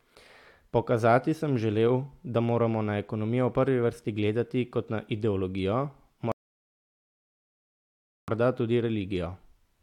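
At 6.32 s, just after "gledati kot na ideologijo", the speech drops to silence in a rebuffering stall: playback exhausted its downloaded audio and halted until more arrived. It resumes at 8.28 s exactly where it stopped, with nothing lost, adding about 1.96 s.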